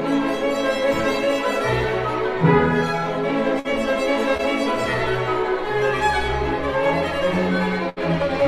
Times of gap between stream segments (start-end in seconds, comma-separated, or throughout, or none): none